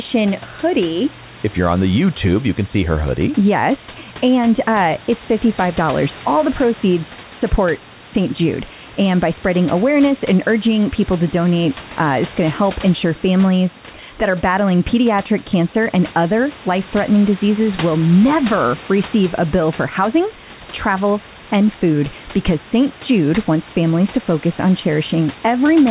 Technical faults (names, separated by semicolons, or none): none